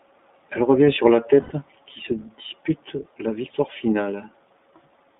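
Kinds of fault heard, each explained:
iLBC codec: The speech passes through a narrowband line of about 200 Hz to 3.6 kHz, coded at 15.2 kb/s in self-contained 20 ms frames, and it sounds plainly rough and synthetic. A spectrogram shows nothing above 3.6 kHz and smeared harmonic detail.
Lost iLBC frames: Between "revient sur la" and "qui se dispute la", from 1.42 to 1.52 s, the decoder fills an 80 ms gap, which points to four 20 ms frames, by repeating the last pitch cycle with noise, giving a held, buzzy vowel. The waveform shows regular repeated periods there.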